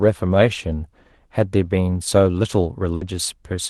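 At 2.95 s the speech breaks up in a burst of packet loss lasting until about 3.04 s. For roughly 60 ms the receiver extends the last sound it had and lowers it, so it comes across as a brief held buzz or fading hiss, and then about 60 ms of the speech never arrives. On a spectrogram the harmonics flatten into a smeared, dimming band before an abrupt jump, all beneath the Opus call path's cut-off near 12 kHz.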